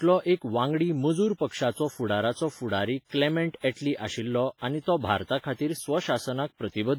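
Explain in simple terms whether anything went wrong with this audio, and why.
Yes, something went wrong, and it lasts the whole clip. The speech sounds smeared and washy, with a ringing around each sound and a hiss that swells and fades along with the talking. That is heavy WMA compression, likely from saving the audio at a very low quality setting. To shrink the file, the encoder throws away quieter detail and spreads its own rounding noise over short stretches of time, so crisp edges blur and the background breathes.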